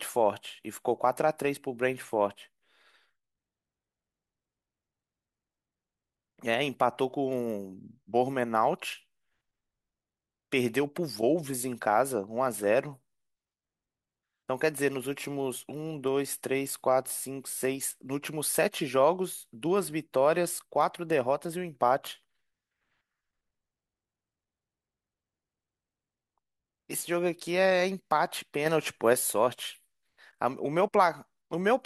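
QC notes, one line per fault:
28.66–29.13 s, sudden gain jump: the speech and the background noise step up together by about 4 dB at the same instant, with no fade, then hold that higher level for roughly half a second. Because the floor rises in lockstep with the voice, the change sits in the signal chain rather than in the speaker's delivery. The likely cause is a digital gain setting applied from one sample to the next without a ramp.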